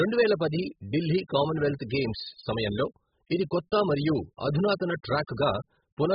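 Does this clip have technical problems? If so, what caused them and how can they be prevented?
Yes. Throughout, the speech sounds dull and warbly, and a spectrogram shows a hard cut-off at 5.1 kHz. This is likely heavy AAC compression at a bitrate near 8 kbps. Encoding at a higher bitrate would prevent it.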